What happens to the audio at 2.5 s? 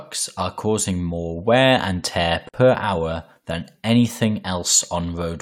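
At 2.49 s the speech drops out for about 49 ms, resuming at 2.54 s. This is a gap at a join of encoded pieces. The audio was encoded in separate chunks, spaced 4 s apart, and joined without trimming. The encoder's start-up silence and last-frame padding were left in at the seam. The result is a short hole whose edges are smeared by the codec. The speech then continues exactly where it stopped.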